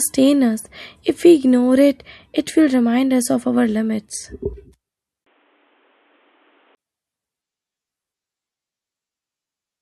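A speech recording where, from 5.24 to 6.77 s, the sound suddenly goes dull and boxy. Nothing comes through above 3.8 kHz, the level drops by roughly 5 dB, and a fresh noise floor appears some 40 dB under the signal. There's a brief 20 ms gap right at the change, and at 6.77 s the full, clearer sound comes back. The likely cause is the input switched to a poorer device, such as a headset's call profile, then back again.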